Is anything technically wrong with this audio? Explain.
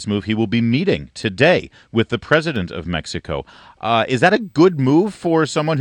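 Yes, there are two faults.

At 1.23 s and again at 2.56 s there is a single sharp click, most likely from dropped samples. A tiny fraction of a millisecond of audio goes missing, so the waveform jumps straight from one value to a later one. Nothing audible is removed. The step itself makes a brief broadband tick, a thin vertical line in the spectrum. Each event is isolated and instantaneous, unlike the ragged bursts of crackle or a gap of silence.

From 4.42 s to the end there is USB whine: a steady, fixed-pitch tone based on 8 kHz, strongest at its 16 kHz multiple, sitting roughly 45 dB below the signal. The bus's 125-microsecond microframe timing draws current that leaks into the audio through power or ground, and that rhythm becomes a tone. Its high, exact multiples of 8 kHz separate it from mains hum, which sits at 50 or 60 Hz and its low harmonics.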